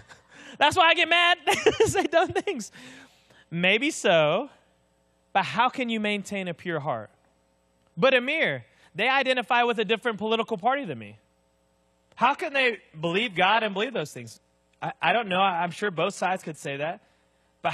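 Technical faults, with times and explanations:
11.82–17.73 s, adaptive stream at a lower bitrate: right at 11.82 s the quality drops in one step with no gap, and it stays that way to the end. The top end stops dead around 14.9 kHz and the treble turns papery and synthetic, with more smearing and swirl on the speech. That's the player switching to a much thinner version of the stream when the connection slowed, and it fits a jump from roughly 96 kbit/s AAC down to about 16 kbit/s HE-AAC.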